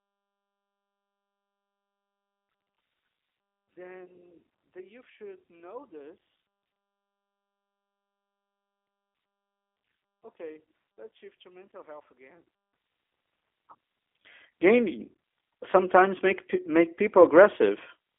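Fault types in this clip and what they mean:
G.729 codec: Throughout, the speech has a rough, slightly synthetic buzz and a confined telephone quality, because the band runs only from about 300 Hz to 3.5 kHz and nothing above 3.5 kHz survives. The damage is plainly audible and fits an 8 kbit/s G.729A voice codec, which rebuilds each 10 ms frame from a vocal tract filter, a pitch predictor and a few pulses rather than sending the waveform itself.
one channel inverted: From the start until 12.73 s, the speech heard in mono is almost gone, dropping by about 29 dB to a faint residue, then it returns at full level for the rest of the clip. The likely cause is one stereo channel carrying reversed polarity, so the centred speech common to both sides cancels when they are summed, leaving only the small difference between them.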